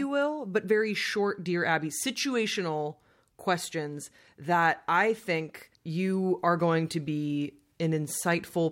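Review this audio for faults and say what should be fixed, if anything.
No faults; nothing to fix.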